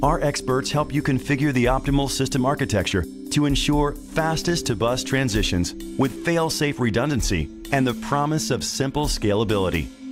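No technical faults can be heard anywhere in the clip.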